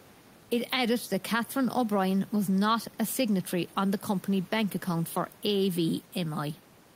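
Nothing goes wrong anywhere in this speech recording: the only thing under the talking is a bit of ordinary room noise, sitting about 28 dB below the speech, and that's just the space the microphone was in rather than anything the system did.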